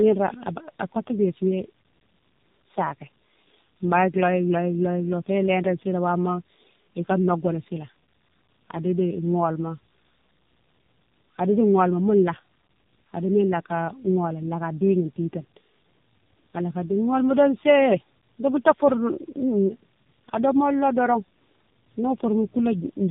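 From start to finish the speech sounds rough, muffled and warbly, with nothing above about 3.7 kHz. This points to tandem speech coding: two low-rate speech codecs in a row, likely G.723.1 then AMR-NB, the second re-encoding the first's already degraded output.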